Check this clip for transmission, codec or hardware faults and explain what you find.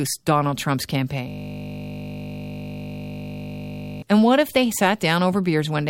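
One hardware fault is present. System hang loop, 1.28 to 4.02 s: the system froze while the sound device kept replaying one 20 ms buffer, producing a steady 50 Hz buzz.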